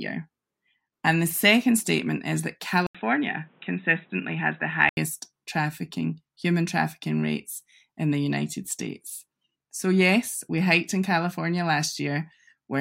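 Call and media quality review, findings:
Speech goes dull and boxy 2.87–4.97 s, after "second statement is that", clearing before "trafficking human trafficking rates"; 80 ms gap, nothing above 3.8 kHz, faint new noise floor. Likely input switched to a poorer device, narrower passband.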